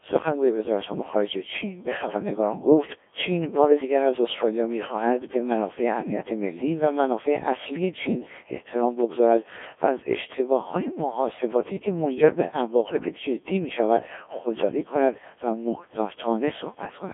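Throughout, the speech carries heavy Codec 2 vocoder damage, which fits its 1.3 kbit/s mode. Only pitch, voicing and a coarse envelope survive, resynthesised from sine waves, so it sounds buzzy and robotic. A spectrogram shows rigid harmonic stripes between 300 Hz and 3.5 kHz, and nothing above 3.6 kHz.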